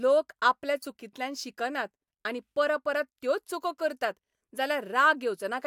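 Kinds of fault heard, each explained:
Corrupt frame decoded: damaged compressed data was decoded anyway, misplacing energy across frequencies for about two frames, heard as a brief chirp, squeak, blip or burst of noise from 0.82 to 0.87 s peaking near -25 dBFS; a spectrogram shows a short, unnatural vertical smear breaking the speech pattern.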